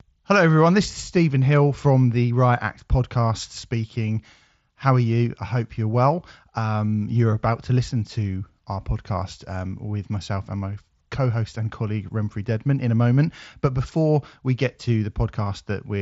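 Speech over a Bluetooth mSBC headset link, band-limited to 8 kHz as that codec dictates, with no technical faults found.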